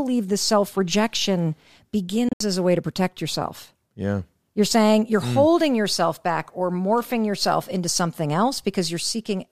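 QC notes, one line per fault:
2.29–2.41 s, Bluetooth dropout: the speech cuts out in several short silent gaps totalling about 102 ms across a 116 ms span, the longest about 73 ms, then resumes further along as if it had kept playing. The likely cause is audio packets arriving too late for the headphones and being discarded. On the waveform the gaps are flat lines with abrupt or briefly faded edges; on a spectrogram they are full-band vertical blank strips.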